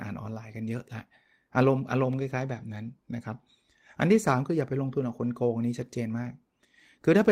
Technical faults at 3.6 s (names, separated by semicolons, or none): none